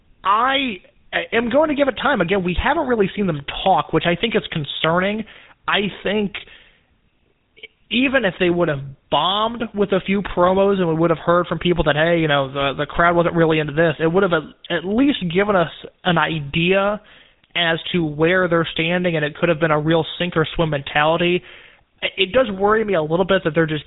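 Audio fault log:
throughout: GSM full-rate codec. The speech passed through the original GSM full-rate coder, which rebuilds each voice from a vocal-tract filter driven by a sparse, evenly spaced pulse train that keeps only one excitation sample in three, a pattern that fits a 13 kbps stream. Everything above 4 kHz is gone, so the speech sounds dull and band-limited, and the coarse excitation leaves a plainly audible buzzy, gravelly roughness.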